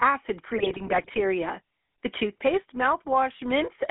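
From the start, and for the whole clip, the speech carries the buzzy, gravelly roughness of the GSM full-rate codec, which fits its 13 kbps rate. The codec rebuilds the voice from a vocal-tract filter fed by sparse, regularly spaced pulses, so the excitation sounds coarse and raspy. The line band runs from about 250 Hz to 3.4 kHz. A spectrogram shows a hard ceiling near 3.4 kHz and a thin low end, with smeared, grainy harmonics in between.

From 0.54 to 1.23 s, GSM bit errors break the signal up. Corrupted filter, pitch and gain values reach the decoder, so individual frames come out with a bent spectrum or a sudden jump in level. The speech squawks, pops and gargles through this stretch, which fits an error rate of roughly 1.5 percent of bits. The waveform shows abrupt spikes from frame to frame. A spectrogram shows blotchy, misplaced energy bands and broadband flashes that replace the normal harmonic structure.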